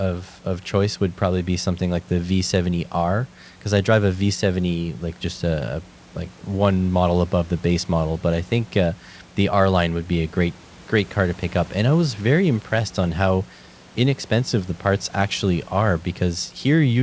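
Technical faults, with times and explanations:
No technical faults are heard in this recording.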